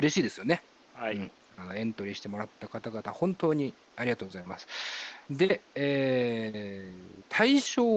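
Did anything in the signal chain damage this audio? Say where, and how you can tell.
No, nothing in the chain seems to have damaged this speech, and the only thing under it is the room's own background noise, sitting about 29 dB below the voice, which belongs to the recording rather than to any stage of the system.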